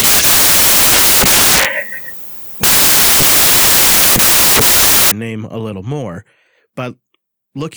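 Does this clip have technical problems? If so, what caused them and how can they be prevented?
Yes. From 0 to 5.11 s, samples built from the wrong bytes turn the speech into loud white noise, ending just before "name a little more". Read samples with the correct byte order and alignment.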